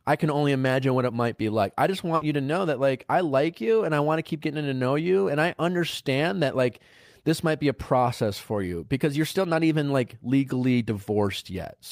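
At 2.15 s, just after "be like I just", there is a burst of packet loss lasting until 2.23 s. A short run of packets never arrived in time. The receiver filled the gap by carrying the last sound forward for about 60 ms, fading it as it went. That fill is heard as a brief held buzz or hiss. Then the speech picks up again at "you to know that", with about 60 ms of the original simply gone.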